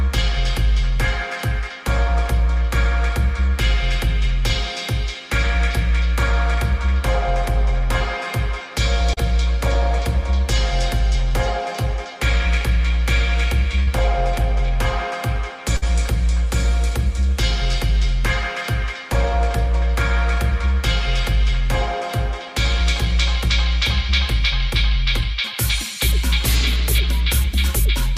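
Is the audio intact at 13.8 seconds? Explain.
No. From 13.83 to 13.89 s there is short concealed packet loss: about 40 ms of the stream never arrived in time, and the receiver filled 39 ms of it by extending the preceding sound, then crossfaded back into the real signal. It is heard as a brief smear or wobble. On a spectrogram the harmonics or noise texture freeze and stretch across that gap. The waveform shows the preceding sound carried on across the gap before normal detail resumes.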